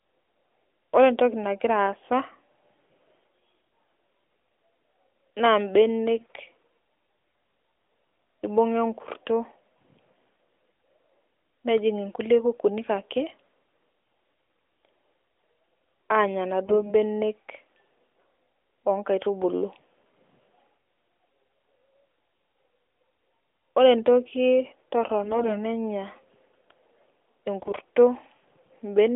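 AMR bit errors at 6.18–6.40, 14.02–14.40, 16.66–16.93, 25.24–25.62 and 27.60–27.78 s turn the speech briefly hoarse and gargly. Corrupted low-priority bits, on the order of several percent, misplace excitation pulses while pitch and level hold, over a narrowband mobile path limited to about 300 Hz to 3.5 kHz.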